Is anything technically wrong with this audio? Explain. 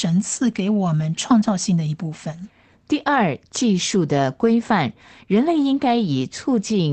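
No, nothing here is technically wrong with it.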